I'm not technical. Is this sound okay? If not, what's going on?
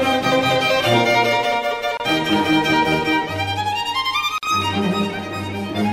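No. The music was encoded in separate pieces and then stuck back together without trimming the bits of silence each piece carries at its start and end. That leaves a gap at a join of encoded pieces: the music briefly drops out, for about 27 milliseconds at 1.97 seconds and about 48 milliseconds at 4.38 seconds, with slightly blurred edges, then picks up exactly where it left off. It comes across as a tiny stutter or hiccup.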